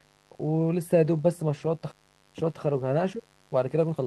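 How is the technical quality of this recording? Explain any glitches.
The recording has three clear technical problems: a constant mains buzz, a sudden jump forward, and a hurried final stretch.

Mains buzz runs through the whole clip. Switching spikes from a dimmer, rectifier or poor shielding get into the signal twice per 50 Hz cycle, spreading harmonics up to several kHz. The result is a steady, raspy buzz about 35 dB below the speech.

A skip ahead occurs between 1.91 and 1.93 s. Roughly 0.7 s of audio was discarded, probably by an overflowing jitter buffer, while later audio was already waiting. The two sides are butted together with no gap, so the speech lurches abruptly forward.

A jitter buffer speed-up follows from 2.0 to 4.05 s. Having too much queued audio, the receiver repeatedly trimmed short pitch-period pieces, removing around 300 ms in total. The speech plays at 113% speed at unchanged pitch and sounds rushed.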